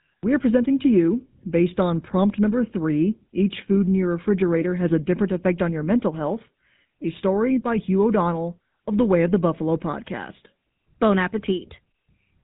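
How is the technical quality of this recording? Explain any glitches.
The quality is poor, with one fault across the whole recording. GSM full-rate codec, throughout: regular-pulse excitation that fits 13 kbps gives plainly audible buzzy roughness, with a spectrogram that is blank above 4 kHz.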